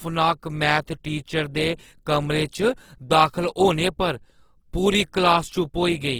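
Throughout the recording, the speech has likely passed through Opus compression at a low bitrate, which fits an encoder running near 16 kbps in its music mode. With too few bits, the codec keeps each band's energy but fills the fine detail by folding lower bands or inserting noise. The voice therefore sounds rough, grainy and noisy rather than swirly, and the damage is plainly audible, though the bandwidth stays full, reaching about 20.2 kHz.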